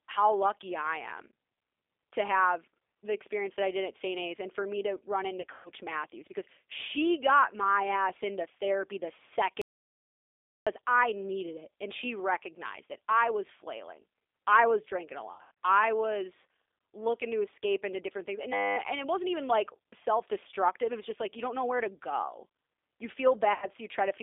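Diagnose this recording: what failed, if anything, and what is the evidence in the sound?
Codec stage: the whole clip is G.729 speech coding at 8 kbit/s, confined to roughly 300 Hz to 3.6 kHz. The speech has a rough, synthetic edge from the pulse-based excitation model. Plain band-limiting would sound only muffled, not grainy.

Network stage: VoIP packet loss concealed by the speech codec occurs at 5.41–5.70 s after "for me to run", at 15.33–15.51 s between "I was drinking a" and "I was looking to", and at 23.53–23.67 s. The decoder stretches the last pitch and filter into a buzzy tone or coloured noise that fades, covering about 150, 180 and 90 ms of lost audio. It is not silence.

Capture or driver stage: an audio dropout to silence runs from 9.62 to 10.67 s, about 1.05 s, cutting in after "ass into therapy the" and returning at "I needed it and". The gap is silent with no room tone, which separates it from concealment. 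The likely cause is a lost input link, with the recorder writing silence.

Driver or buffer stage: a system hang loop at 18.53–18.77 s repeats one 10 ms segment 24 times, heard as a steady 100 Hz buzz. That fits a 10 ms ring buffer cycling while the system froze. The exact periodic repetition distinguishes it from concealment's decaying, evolving tone.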